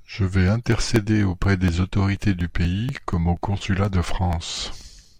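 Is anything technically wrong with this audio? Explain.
Yes. Regular ticks every 0.24 s run through the speech from 0.24 to 5.05 s. These are periodic USB or driver dropouts, each stall skipping about 10 ms.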